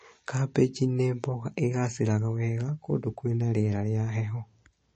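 Speech throughout, with plainly audible damage, likely from MP3 compression at a low bitrate: the voice sounds watery and swirly, s sounds chirp metallically, and a spectrogram shows a hard ceiling at 8.4 kHz with flickering, patchy gaps where weak frequency lines drop out between frames.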